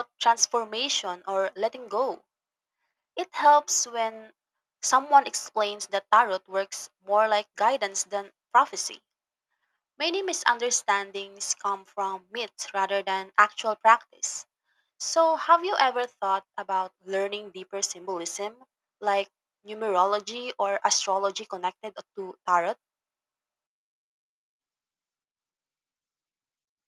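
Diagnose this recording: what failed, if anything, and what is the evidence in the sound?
Nothing failed here; no stage in the chain shows a fault.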